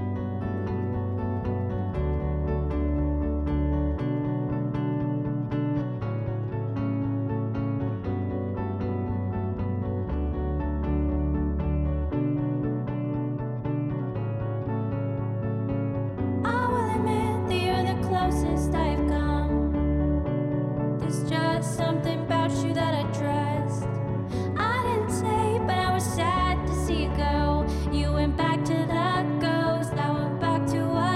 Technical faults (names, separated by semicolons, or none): none